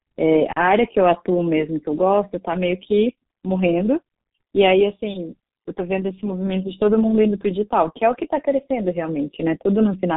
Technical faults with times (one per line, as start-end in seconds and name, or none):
0.00-10.16 G.723.1 codec